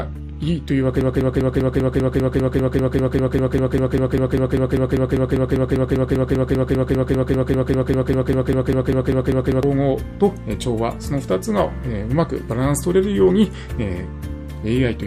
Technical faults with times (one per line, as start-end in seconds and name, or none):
1.01-9.63 broken-record loop